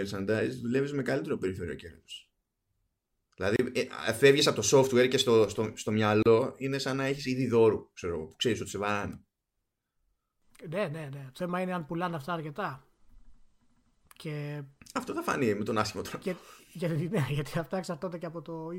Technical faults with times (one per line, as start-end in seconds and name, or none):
3.56-3.59 gap at a join of encoded pieces
6.23-6.26 gap at a join of encoded pieces